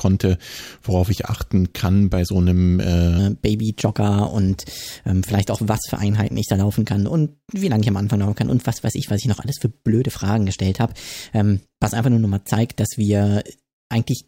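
From 3.19 s, just after "kann bei so einem", a section at the wrong speed runs to the end. Playback is 1.15 times too fast. Pitch rises about two semitones with it. The voice sounds high and hurried. A likely cause is resampling against the wrong clock.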